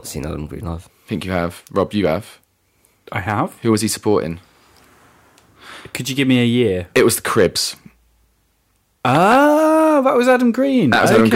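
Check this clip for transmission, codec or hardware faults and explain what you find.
The speech has hard clipping in four places: 1.78 to 2.06 s, 3.29 to 4.13 s, 6.97 to 7.46 s just after "a year", and 10.92 s to the end. The level exceeds what the chain can pass by about 2 dB in the first two, about 6 dB and about 8 dB later, so peaks are sheared flat. Early passages crackle on peaks, while the last two fuzz harshly. Waveform tops look squared off, and the spectrogram shows broadband harmonic smearing up high.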